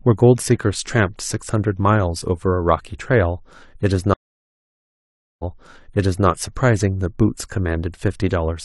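At 4.14 s the speech goes silent for 1.25 s. This is a stream reconnect. The connection broke, and the player started a fresh decoder mid-stream. Sound resumes 0.88 s earlier than where it stopped, as the server resent a burst. The repeat lasts until 6.27 s.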